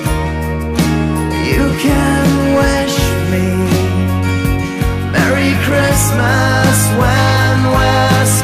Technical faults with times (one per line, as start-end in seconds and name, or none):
0.00-8.44 hard clipping